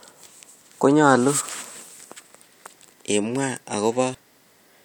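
At 2.35 s and again at 4.14 s, compressed frames are skipped in this speech. The decoder drops whole frames, so the sound jumps ahead by about 150 ms and then about 100 ms, which fits a few 32 ms frames. Each join is a jump ahead, unlike a silent dropout.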